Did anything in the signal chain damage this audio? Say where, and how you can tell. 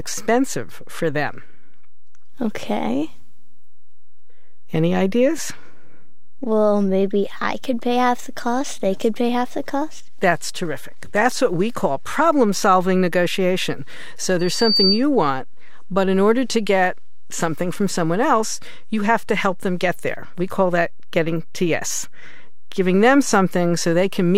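Yes. The first problem is a DC offset lasting the whole clip, at about -25 dBFS, which points to the analogue input or the converter stage. A constant voltage added before or during conversion shifts every sample by the same amount. On a waveform the speech rides above or below the centre line rather than straddling it. On a spectrogram it shows as a steady band at 0 Hz. You don't hear it directly, but it eats headroom.

The second problem is a loudspeaker feedback squeal from 14.39 to 15.04 s, just before "want but in order". It comes from the acoustic loop between the microphone and the loudspeaker it feeds. At 4.6 kHz the loop gain exceeded one, so that tone fed on itself, swelling over roughly 0.4 s to around 5 dB above the speech. A spectrogram shows a single bright horizontal line at 4.6 kHz that thickens and brightens, then stops when the loop is broken.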